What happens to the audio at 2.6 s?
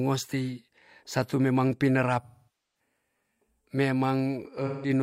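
At 2.6 s the speech is inside an AAC frame loss with concealment running from 2.22 to 2.80 s. The decoder extends the last good spectrum, so sound smears and decays toward silence, then fades back in. That gradual fade, not a hard cut, separates it from a plain dropout.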